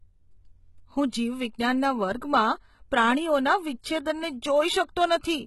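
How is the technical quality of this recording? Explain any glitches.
The recording has clear technical faults: heavy low-bitrate coding damage throughout, plus two brief pre-echoes.

HE-AAC compression, throughout: the gritty, lispy treble is likely from spectral band replication rebuilding the highs from copied lower bands. Nothing reaches above 11.8 kHz, which fits a bitrate around 16 kbps.

Pre-echo, 1.10 to 1.13 s and at 1.59 s: quantisation noise spread across a transform block leaks ahead of sharp attacks, leaving a short hiss of 31 ms and 10 ms that softens each onset.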